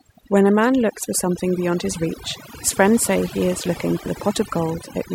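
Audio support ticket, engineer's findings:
Overdone noise removal, throughout. Background drops and breaks up into twinkling specks. Noise reduction set too strong, cutting individual frequency bands near its noise estimate and taking quiet voice detail too. Unlike a noise gate, gaps flicker rather than switching cleanly.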